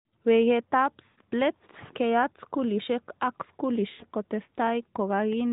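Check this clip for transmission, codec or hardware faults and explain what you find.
Two dropouts stand out, both lost AMR speech frames, heard through an AMR narrowband mobile codec path that carries the speech band-limited below 4 kHz with only light coding damage.

From 1.06 to 1.19 s, just before "let keyat skulishek ak", the speech smears into a held, drawn-out tone that sags in level for about 120 ms, and it returns briefly thin. From 3.90 to 4.06 s, right after "let keyat skulishek ak", the same stretched, fading drone lasts about 100 ms. Frames that failed their checksum were concealed by repeating the last good pitch and vocal-tract settings with shrinking gain, which fits a run of five or six 20 ms frames.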